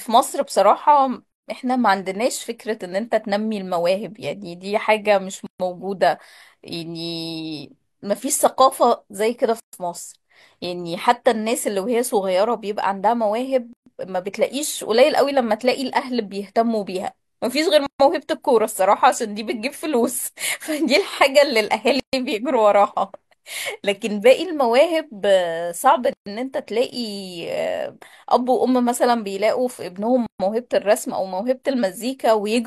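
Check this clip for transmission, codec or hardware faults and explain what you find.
The speech was assembled from separately encoded pieces that were joined without trimming, leaving a gap at a join of encoded pieces about every 4 s. The gaps fall at 1.32, 5.47, 9.60, 13.73, 17.86, 22.00, 26.13 and 30.26 s. The first lasts 145 ms and the rest 133 ms. Encoder start-up delay and last-frame padding stay in, so the speech drops into silence with smeared edges and resumes where it stopped.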